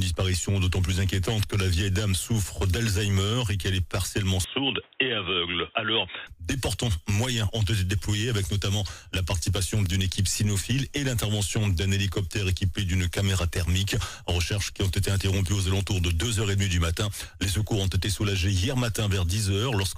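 At 4.44 s the sound suddenly goes dull and boxy, with nothing above 3.8 kHz, drops a bit in level and picks up a faint new noise floor, all without any gap. That's likely the input switched to a poorer device, and it clears again at 6.27 s.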